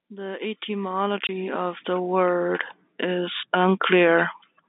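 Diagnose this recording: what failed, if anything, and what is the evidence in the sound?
The network stage failed briefly: packet loss filled with silence at 1.27 to 1.29 s, right before "of the word is". About 20 ms of speech drops out completely, which points to two lost 10 ms packets. The receiver played silence instead of concealing the gap, leaving hard edges. On a waveform it is a flat-line notch. On a spectrogram it is a thin blank vertical stripe, cutting across the 200 Hz to 3.7 kHz G.711 telephone band.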